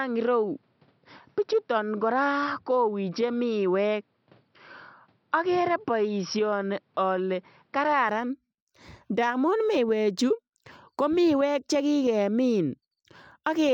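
Speech that sounds dull and boxy from the start until 8.09 s, with nothing above 5.7 kHz and a faint added noise floor well below the voice. At 8.09 s the top end opens up abruptly, with no gap and no jump in level. The likely cause is an input switched to a poorer device: the recording began on a narrower-band microphone or headset path and then moved to a fuller-range input.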